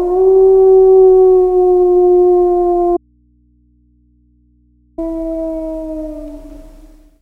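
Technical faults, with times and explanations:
2.97 to 4.98 s, audio dropout to a faint residue: the sound cuts out abruptly for about two seconds, leaving only mains hum around 40 dB below the signal. That's likely the source dropping while the input stayed live, so the open input just hums.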